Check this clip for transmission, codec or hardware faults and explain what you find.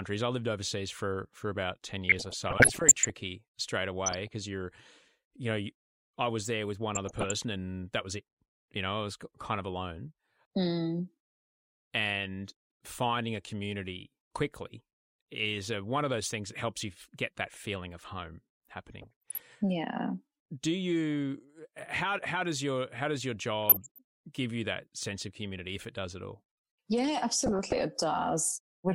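DAB burbling appears six times: 2.09–3.10 s, 4.05–4.27 s (before "because you're"), 6.95–7.31 s (between "was there with one" and "and that was it"), 19.01–19.42 s, 23.63–23.99 s (between "your how does your" and "give you that sense") and 27.46–27.81 s. Weak reception lets bit errors slip past error correction and corrupt samples and scale factors, so single sub-bands get noise blips or jump in level for up to a frame. The speech gets short blips of noise, seen on a spectrogram as scattered blocky patches of energy.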